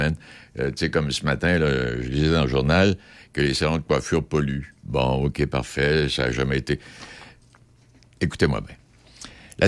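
No technical faults can be heard anywhere in this recording.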